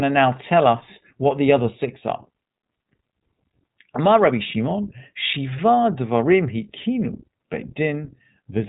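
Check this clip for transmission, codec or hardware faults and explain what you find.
One fault runs through the whole clip: iLBC codec coding. The speech is plainly band-limited, with nothing above 3.8 kHz, and sounds audibly rough and synthetic. The codec codes the excitation of each 20 ms frame on its own, without drawing on the previous frame, and the quality fits iLBC's 15.2 kbps mode.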